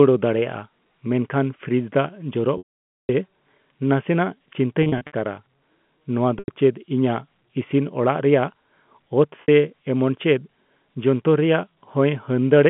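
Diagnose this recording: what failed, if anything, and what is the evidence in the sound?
Packet loss with pitch repetition at the network stage, at 2.58–3.09 s, 4.83–5.13 s, 6.39–6.48 s and 9.42–9.48 s. The 0.5 s gap at 2.58 s starts as a buzzy held tone, fades to silence, then cross-fades back. The shorter losses, scattered over 0.3 s near 4.8 s, sound like brief held notes. The receiver filled each gap by repeating the last pitch period. The narrow G.711 telephone band carries the sound throughout.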